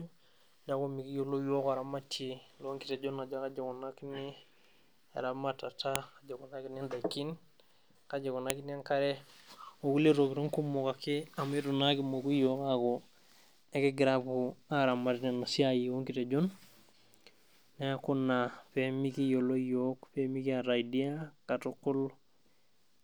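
At 5.96 s there's a sharp, loud click in the speech, and another at 8.50 s. Both are a file header played as audio. It sounds like the clip was built from separate WAV pieces joined end to end without stripping each piece's header, so those few dozen bytes of metadata get read as sample values. That produces a brief snap at the start of each new piece, regardless of what the speech is doing there.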